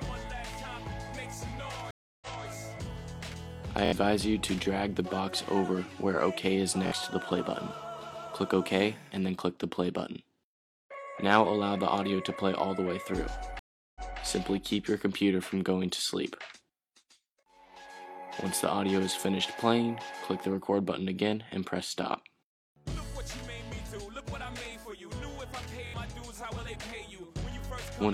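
The audio has two faults. Stream reconnects occur at 1.91 s and 13.59 s. Each time the sound drops to silence, for 307 ms and then 362 ms, after a broken connection. A fresh decoder restarts and playback resumes 232 ms earlier, repeating a little audio. Repeated buffers cause short stutters at 3.85 s, 6.87 s and 25.87 s. Each repeated piece is about 23 ms long, which fits a 1024-sample buffer. It plays again three, two and three extra times with hard joins, and around 50 to 70 ms of new audio is lost each time.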